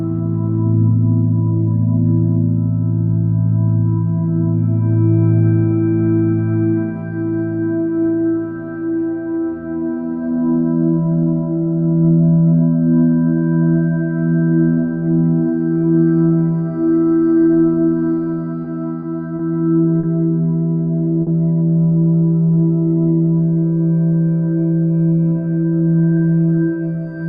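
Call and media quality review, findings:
Repeated stalls (stutter), 18.62–20.05 s: four holds totalling 110 ms, longest 40 ms; jitter buffer underruns, last sound continued. Spectrogram shows smeared, frozen bands; waveform shows repeated cycles.

Short stall from a late packet, 21.22 s: one 50 ms hold while the packet was late. The spectrogram shows a flat horizontal smear.

Jitter buffer slow-down, 22.45–23.61 s: 73 ms added by repeating pitch periods, running at 95% speed with the same pitch. Spectrogram shows stretched harmonics; waveform shows repeated cycles.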